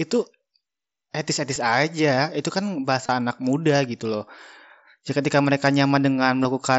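Concealed Bluetooth headset packet loss hits at 1.55 s, just before "aja itu", then from 3.06 to 3.09 s, and at 5.43 and 6.43 s. Lost packets get filled by repeating recent waveform. The single lost frame at 1.55 s slips by, but the 3.06 s gap leaves a brief buzzy hold and a small warble.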